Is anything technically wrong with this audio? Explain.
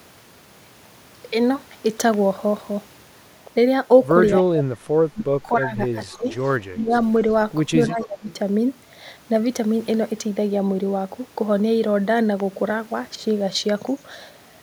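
Yes. Speech suppressed in double talk between 4.4–4.91, 5.14–5.79, 6.12–6.26, 6.72–6.93 and 7.88–8.29 s. The voice dips sharply, sometimes very deep, likely because an echo canceller ducked both its own talker and the loudspeaker echo while both sides talked. Echo leak at 6.33–6.49, 8.0–8.04 and 8.3–8.34 s brings back faint scraps of the voice about 0.26 s late, likely from a loudspeaker-side canceller letting residual echo through.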